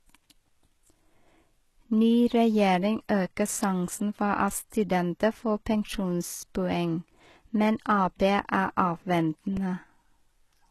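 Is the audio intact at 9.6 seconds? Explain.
No. A repeated buffer occurs at 9.57 s. New audio did not arrive in time, so the playback device replayed its last small block twice more before moving on. The block is about 1.33 ms long, which fits a 64-sample buffer, and about 3 ms of the original sound is lost. Because the repeated piece is so short, the stutter comes out as a click or brief buzz with a hard join at each repeat.

The same moment also carries damage that runs through the whole clip, likely from HE-AAC compression at a low bitrate, around 16 kbps. Nothing sounds above about 12.3 kHz, and the treble below that is rebuilt from lower bands by spectral band replication rather than carried through. Its harmonics do not line up across the crossover, so the codec damage is plainly audible, with s sounds turned gritty, metallic or lispy.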